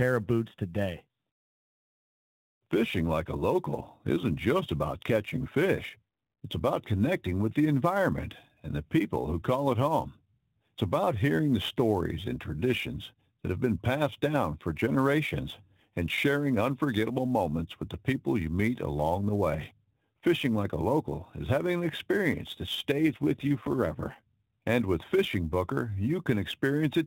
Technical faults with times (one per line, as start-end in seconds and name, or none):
0.00-27.07 sample clock jitter
22.92-24.26 AMR rate drop